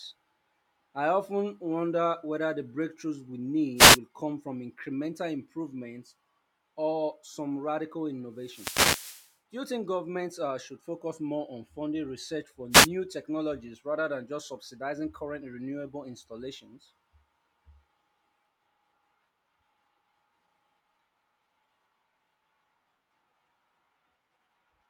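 A speech recording with three wireless microphone noise hits: bursts of static at 3.76 to 3.99 s, 8.37 to 9.36 s and 12.71 to 12.89 s, the middle one lasting about a second. Each is an FM radio fade, where reflected signals cancel at the receiver and its hiss swells over the voice. Unlike a digital dropout, which cuts to silence, these fill the gap with rushing noise.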